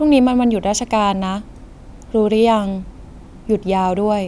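No technical faults can be heard in this recording.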